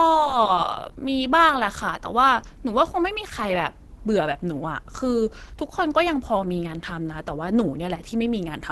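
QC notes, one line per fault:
Throughout, Opus compression: speech sounds muffled, hoarse and grainy with a trimmed top end, likely hybrid speech mode, fitting roughly 16 kbps.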